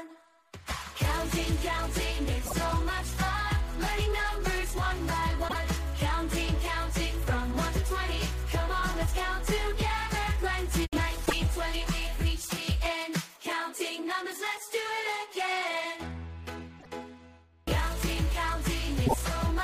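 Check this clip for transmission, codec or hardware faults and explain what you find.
One fault recurs: damaged data in a compressed stream. It occurs at 2.42–2.53 s, 5.45–5.56 s, 11.22–11.33 s, 16.76–16.87 s and 19.03–19.14 s. Corrupted frames throw the decoder out of sync. Each event is a short chirp or blip lasting about 0.11 s.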